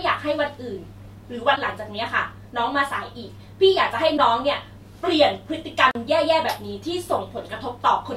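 At 1.53 to 1.58 s, a burst of damaged data in the compressed stream. The decoder misreads the broken frames, loses sync and hunts for the next header. The same fault returns at 4.14 to 4.19 s.

At 5.91 s, a block of digital silence lasting 40 ms. The sound cuts out and returns with no fade, so it sounds like a short hole in the speech.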